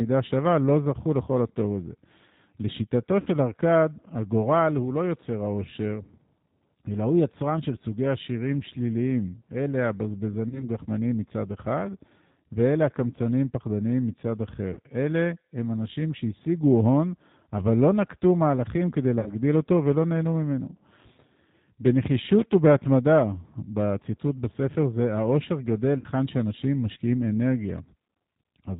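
The whole clip runs through the G.729 codec, and it's plainly audible. At 8 kbit/s the speech is rebuilt from a vocal tract filter, a pitch predictor and a handful of pulses per frame, so nothing above 4 kHz survives. The result is dull and band-limited, with a slightly rough, synthetic edge on every syllable.

Packet loss concealed by the speech codec turns up five times. At 3.20 to 3.28 s there's a gap of about 60 ms, which fits two lost packets. Single-packet losses of about 30 ms follow at 10.49 to 10.65 s and at 14.74 to 14.79 s. Then come two more 60 ms losses, at 19.20 to 19.32 s and at 25.99 to 26.06 s. Each time the decoder keeps extrapolating from its last pitch and filter state while turning the gain down. You hear the sound smear into a buzzy tone or coloured noise that fades. Because each frame is built on the previous one, the audio stays weak and off for a moment after the packets come back, which is why some of these events run longer than the lost audio itself.

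At 22.39 to 22.54 s there's a short burst of loose connector crackle. A worn or dirty contact is making and breaking rapidly, chopping the signal. It sounds like irregular scratching laid over the audio for about 150 ms.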